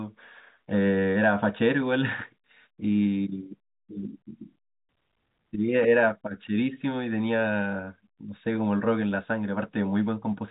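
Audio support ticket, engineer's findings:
Nothing to flag here: the speech sits in the ordinary telephone band with nothing above about 3.8 kHz, which is just what G.711 telephone coding gives you.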